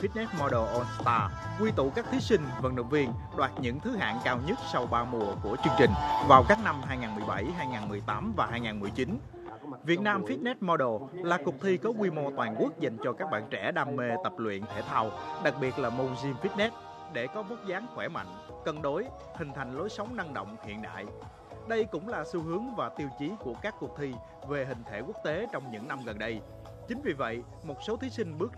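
At 5.64 s the whole sound, background noise included, leaps up by about 8 dB in an instant and stays there until 6.55 s, when it drops straight back. At 16.66 s it falls by about 6 dB just as abruptly and stays lower to the end. These are sudden gain jumps, likely a digital gain setting applied between one sample and the next with no ramp to smooth the change.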